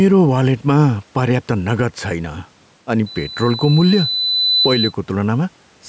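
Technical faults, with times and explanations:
Throughout: gain pumping. The gain swings by around 5 dB. Loud and quiet passages sit closer together than natural, giving a squashed quality. The likely cause is microphone gain set too high, with a fast limiter or compressor clamping down on each loud syllable. The room noise sits about 40 dB below the speech.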